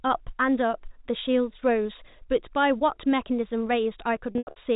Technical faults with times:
4.32-4.56 packet loss with pitch repetition

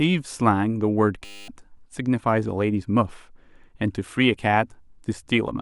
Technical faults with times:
1.25-1.48 system hang loop

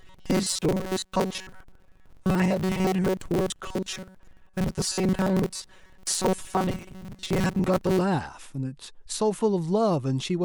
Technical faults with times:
0.01-8.01 robotic sound from repeated short buffers

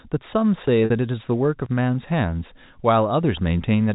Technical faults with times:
0.67 audio missing between chunks
0.85-0.90 packet loss with pitch repetition
1.66 audio missing between chunks
3.64 audio missing between chunks

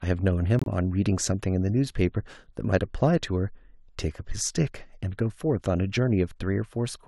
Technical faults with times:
0.59-0.67 corrupt frame muted

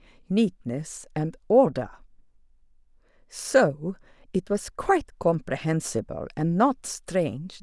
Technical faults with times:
none

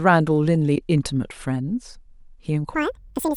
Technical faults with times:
2.75-3.37 audio read two samples at a time (double speed)

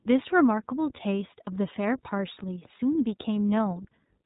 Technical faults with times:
0.00-4.25 iLBC codec
1.44-1.48 lost iLBC frames

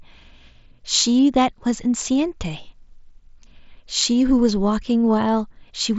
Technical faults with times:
none

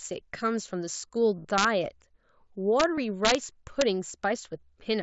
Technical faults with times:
1.37-1.45 concealed Bluetooth headset packet loss
1.58-1.64 integer overflow
2.80-2.84 integer overflow
2.95-2.98 concealed Bluetooth headset packet loss
3.25-3.35 integer overflow
3.81 integer overflow

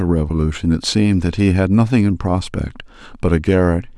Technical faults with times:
none

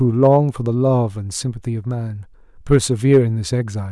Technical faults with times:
0.23-0.37 hard clipping
2.72-2.76 hard clipping
3.12-3.18 hard clipping

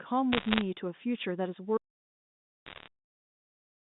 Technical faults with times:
0.32-0.61 bit errors on a digital phone line
1.77-3.99 audio dropout to silence
2.66-2.88 bit errors on a digital phone line

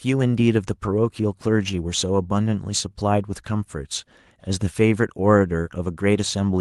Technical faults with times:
0.00-6.60 clock drift between sender and receiver
0.32-6.12 repeated timing corrections

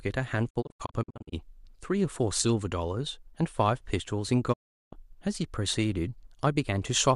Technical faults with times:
0.49-1.34 digital broadcast dropout
4.52-4.94 digital broadcast dropout

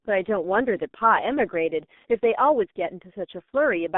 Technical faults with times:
0.00-3.97 G.723.1 codec

